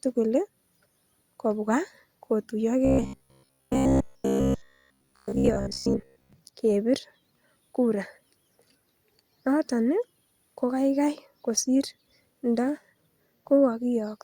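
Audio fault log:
2.85–6.33 s robotic sound from repeated short buffers: rigid metallic 66.7 Hz buzz, likely from one short block replayed over most of the audio, fitting a 15 ms repeat. The waveform shows identical repeating cycles, and the spectrogram shows evenly spaced harmonic stripes.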